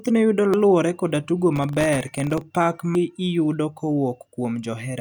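At 0.54 s, just before "koda tugo", a brief glitch marks damaged data in the compressed stream: the decoder misreads corrupted frames, loses sync and jumps to the next frame header. A spectrogram shows a thin broadband smear, and the waveform a small discontinuity. The same blip recurs at 2.95 s.

From 1.53 to 2.41 s, after "koda tugo", processor overload crackle appears. Dozens of missed deadlines each leave a tiny silent gap, which fits buffers of under a millisecond. The waveform shows many hard-edged dropouts, and the spectrogram shows dense vertical clicks.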